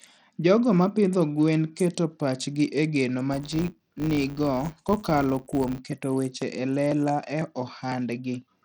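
A speech recording, it shows three separate problems. Throughout, the audio has plainly audible codec damage: treble thins out and flickers, and a gritty haze sits on the sound. That points to Bluetooth SBC compression as the likely cause, with a small bit budget (consistent with a stream of roughly 80 kbps) that starves the upper sub-bands and coarsely quantises the rest, so high frequencies drop in and out and aliasing grit rides along. From 3.33 to 5.81 s, a processing filter appears to be restarted on every block: it loses its memory at each block boundary and begins again from silence. Each restart throws a small transient, and at this block rate those transients fuse into a 100 Hz buzz that rises and falls with the level of the speech. From 5.92 to 8.42 s, periodic USB or driver dropouts take over: something stalls the audio path about every 0.5 s, and each time roughly a millisecond of signal is skipped outright rather than filled. 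That produces seven or so evenly spaced ticks across those two and a half seconds, audible only while speech is present.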